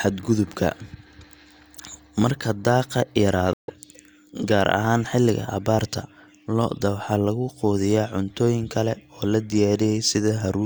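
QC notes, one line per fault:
3.53–3.72 s, stream reconnect: the connection dropped and the player rejoined the stream with a fresh decoder, so the speech cuts to silence for about 0.15 s and resumes roughly 0.15 s further on, leaving an audible skip.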